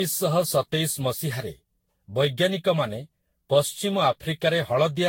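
Generation loss runs through the whole speech recording. It sounds swirly, hollow and smeared, and attacks are blurred. Nothing reaches above 16.6 kHz. The likely cause is about ten rounds of lossy re-encoding, consistent with Vorbis near 60 kbit/s, each adding fresh damage.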